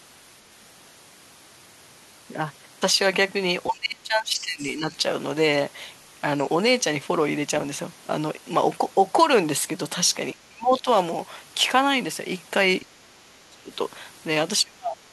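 Speech suppressed in double talk occurs four times in this speech recording: 3.69 to 4.93 s, 10.34 to 10.86 s, 13.01 to 13.71 s and 14.63 to 15.13 s. In each span the voice sinks, thins or breaks into pieces, by roughly 20 dB at first and deepening to around 35 dB in the last. The likely cause is an echo canceller facing two people talking at once, unable to tell the local talker from loudspeaker echo, and clamping both down. The other side's voice leaking through appears briefly between 12.81 and 12.86 s, a faint scrap sitting roughly 30 dB below the main voice. It is likely residual echo: the far-end talker, played over the device's loudspeaker, was picked up by the microphone and not fully removed.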